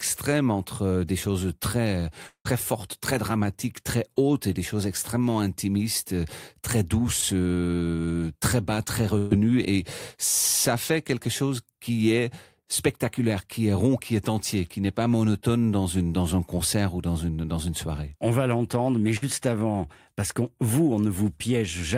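At 2.27 to 2.47 s the sound stretches into a fading buzz or hiss and then drops to brief silence, with about 180 ms lost, likely from a long network dropout. At 7.21 s a short concealed packet loss leaves a quick smear where about 20 ms never arrived, too brief to fade or go quiet. At 9.18 to 9.33 s and 19.17 to 19.24 s, bursts of packet loss hold the last sound as a decaying buzz or hiss, losing about 120 ms and 60 ms, then the speech resumes, the first time without ever reaching silence.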